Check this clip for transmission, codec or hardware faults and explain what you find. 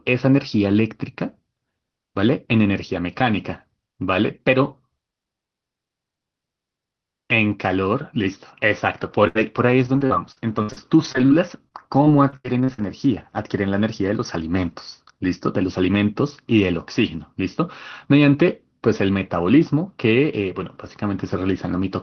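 One transmission fault stands out. Repeated packet loss (robotic sound) runs from 9.01 to 13.16 s: packets kept going missing, and each hole, the longest about 81 ms, was patched by extending the preceding sound, roughly 0.7 s in all. The result is choppy speech with fragments gone. Throughout, the speech carries the coding texture of a call path, with the top end rolled off near 6 kHz, which fits a low-bitrate Opus stream.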